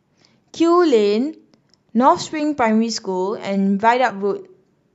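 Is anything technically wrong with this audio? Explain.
Yes. At about 4.09 to 4.11 s, compressed frames are skipped. Roughly one frame, about 20 ms of speech, is never decoded. The 23.2 ms frame length fits 1024-sample frames at 44.1 kHz. The speech jumps ahead by the length of the missing frame at the join. On a waveform or spectrogram it appears as a discontinuity.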